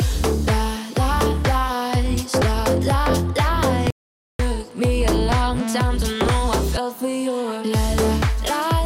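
At 3.90 s the sound drops out to dead silence for about 490 ms, coming back at 4.39 s. That's an audio dropout to silence: no room tone at all in the gap, likely from the input briefly disconnecting or muting while recording carried on.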